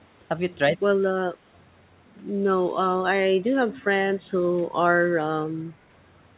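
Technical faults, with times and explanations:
1.02–1.3 s and 5.19–5.23 s, speech suppressed in double talk: with both sides talking, the echo canceller likely mistook this talker for loudspeaker echo and pulled the voice down, by roughly 25 dB and then 15 dB.
3.74–3.81 s, echo leak: the far end's echo canceller likely failed to remove all its loudspeaker pickup, so a faint copy returns 168 ms late, roughly 20 dB below the speech.
4.17–4.26 s, background gated by the echo canceller: while the loudspeaker played, the canceller clamped the microphone, so the room sound dips by about 11 dB before returning.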